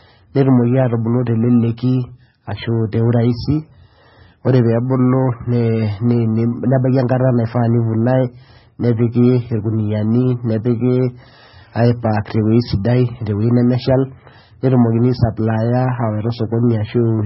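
Throughout the speech, a rough, metallic edge rides on the voice and vanishes in pauses. This is periodic clock jitter: the converter's clock wobbles at around 1 kHz, adding sidebands at that spacing. Also throughout, the sound is watery and swirly, with nothing above 5.6 kHz. MP3 compression is the likely cause, and the heavy damage fits a very low bitrate of about 16 kbps.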